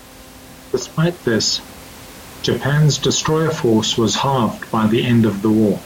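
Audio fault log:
No technical fault is present in the speech signal, and the room's background noise sits about 22 dB below the speech as part of the recorded space.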